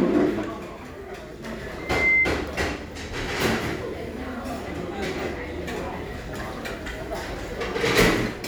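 From 1.78 to 2.34 s a loudspeaker feedback squeal rises at 2.1 kHz, swelling over about a third of a second to roughly 10 dB above the sound as the mic-speaker loop runs away. A spectrogram shows a bright horizontal line there; the waveform swells.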